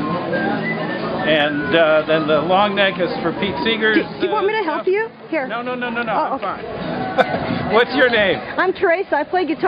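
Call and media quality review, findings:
Nothing to flag here, the audio comes through without any problems worth logging.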